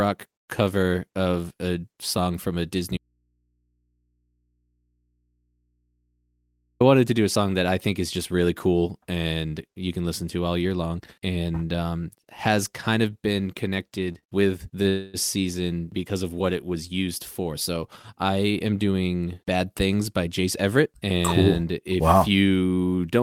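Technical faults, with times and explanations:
2.97–6.80 s, audio dropout to a faint residue: the speech cuts out abruptly for about 3.8 s and only a low mains hum remains, about 50 dB down. The path after the break likely stayed live with an open input, so hum fills the gap instead of silence.
14.12 s, 14.19 s and 14.83 s, short stall from a late packet: three brief holds of 24, 41 and 20 ms. Each time a packet arrived late, the receiver stretched the last sound until it came. Nothing is lost, but a sound lingers with a slight buzz or dip.
14.89–15.17 s, call audio freeze: the last sound is held for about 249 ms as a fading buzz or hiss, with no true silence. Delayed packets likely emptied the jitter buffer. The speech then resumes where it stopped, so a gap is inserted and nothing is missing.
18.15–19.08 s, jitter buffer speed-up: the speech runs at about 113% speed with unchanged pitch and sounds hurried. 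The buffer held too much audio, so the receiver trimmed many pitch-period pieces in a row, roughly 150 ms in total, to cut the delay.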